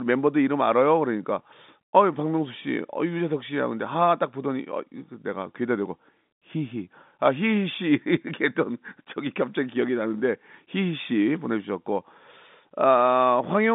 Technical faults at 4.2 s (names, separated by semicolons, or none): none